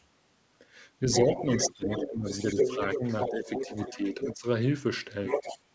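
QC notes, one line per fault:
1.12–4.33 s and 5.26–5.59 s, other side's voice leaking through: a second voice runs under the talker, a little quieter at first and about as loud in the later stretch. The far end's loudspeaker sound was likely not fully removed by the echo canceller.
1.2–3.48 s and 3.9–4.45 s, speech suppressed in double talk: the talker dips by up to about 15 dB in pieces, for about a second and then under half a second. Both sides overlap here, likely making the canceller turn everything down.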